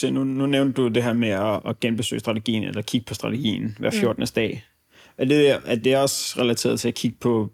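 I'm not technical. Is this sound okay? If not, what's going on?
Yes, nothing wrong can be heard in this speech recording, so no fix is needed.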